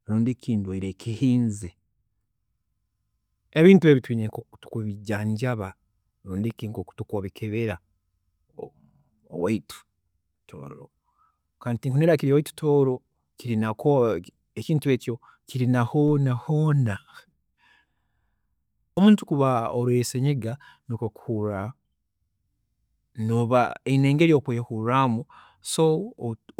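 At 16.08 s, just after "ekintu eki kiri na", the signal's zero line suddenly shifts by about -36 dBFS, a DC step. The offset then decays through a 2 Hz high-pass, leaving a single low thump while the speech continues unchanged.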